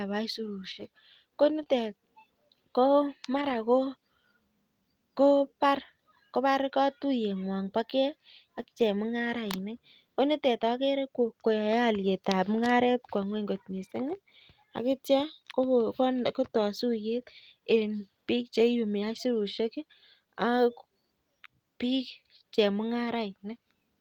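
Right at 1.59 s there's a lost packet rebuilt from error correction: about 20 ms where the decoder played the low-bitrate backup copy carried in the next packet. There's no gap, just a brief rougher, noisier patch in the speech. The same thing happens over a longer stretch between 3.33 and 3.55 s, where about 120 ms is rebuilt that way, and again briefly at 19.15 s.

Just after the first one, from 1.63 to 1.67 s, there's a short concealed packet loss. About 20 ms never arrived, so the receiver extended the preceding sound to fill the hole and then blended back into the real audio. You hear it as a tiny smear or wobble.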